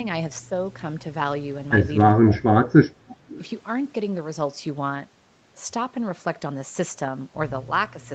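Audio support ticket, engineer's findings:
Speech ducks sharply at 2.11–2.44 s, level falling by about 20 dB for roughly 0.3 s in total. Likely speech suppressed in double talk: canceller couldn't separate near talker from loudspeaker echo, attenuated both.

Faint delayed repeat of the voice at 3.08–3.48 s, trailing by 386 ms, about 25 dB under the direct speech. Likely echo leak: far-end loudspeaker pickup not fully cancelled, residual returned down the call path.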